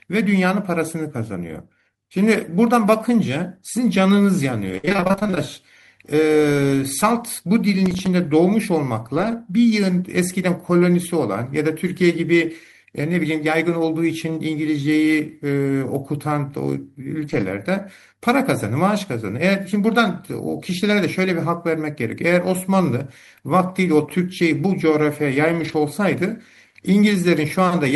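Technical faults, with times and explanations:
4.77–5.38 s, repeated packet loss (robotic sound): a dense run of short holes, the longest 59 ms, arrives faster than the stream can recover. About half the span, 308 ms, is patched by extending the preceding sound, and 340 ms is simply missing. The result is choppy audio with pieces missing.
7.86–8.06 s, processor overload crackle: the audio thread misses a handful of deadlines, which fits buffers of around 5 ms. Each missed buffer plays as silence with hard edges, so the sound tears into a brief gritty crackle that stops once the load clears.
9.16–9.34 s, 17.20–17.42 s and 25.60–25.74 s, lost packet rebuilt from error correction: several separate lost packets, covering 100, 120 and 80 ms, are filled from low-bitrate redundant copies carried in the following packets. Nothing drops out, but these stretches sound rougher and noisier than the surrounding sound.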